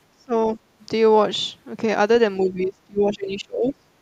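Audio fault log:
0.18 to 0.6 s, speech suppressed in double talk. The speech dips in short pieces, about 20 dB at the deepest. Only a small part of this span is hit. The likely cause is an echo canceller that heard far-end sound at the same time and could not tell it from this talker, so it turned both down.
2.42 to 3.83 s, speech suppressed in double talk. The dropouts are deeper here, about 25 dB. They cover most of this span.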